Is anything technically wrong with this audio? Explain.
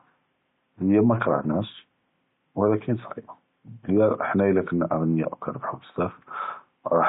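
Yes. Throughout the speech there is heavy damage, likely from MP3 compression at a low bitrate, around 32 kbps. Starved of bits, the encoder drops the treble above a fixed cutoff. It zeroes weak frequency lines, which flicker between frames. Sibilants turn watery and metallic, and consonant attacks smear. Faint room noise sits about 50 dB below the speech.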